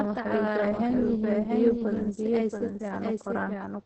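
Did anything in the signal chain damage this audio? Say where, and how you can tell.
Yes. At the capture or editing stage, a doubled audio track runs through the whole clip, likely from a second, slower path recording the same speech. A full-band copy trails the original by roughly 0.7 s at about 5 dB lower, with no decay or room colour, so every syllable repeats as a dry echo.

At the codec stage, Opus voice compression in its SILK linear-prediction mode has heavily damaged the speech. Nothing survives above 8.5 kHz, and the excitation is coded so coarsely that the voice sounds muffled, hoarse and slightly robotic. This fits a wideband stream at around 10 kbps.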